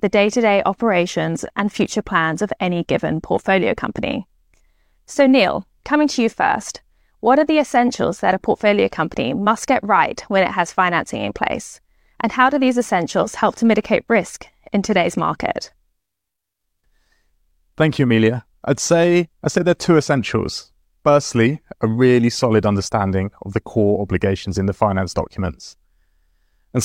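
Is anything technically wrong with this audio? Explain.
No, nothing is technically wrong with this audio.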